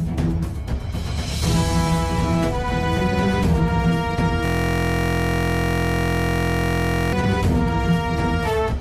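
From 4.45 s to 7.13 s the sound is replaced by a system hang loop. The computer or its audio driver stopped supplying new data. The sound hardware kept replaying what was already in its ring buffer. A slice about 23.2 ms long repeats over a hundred times, which fits a 1024-sample buffer. At that length the repeats merge into a steady buzz at about 43.1 Hz. Normal sound resumes at 7.13 s.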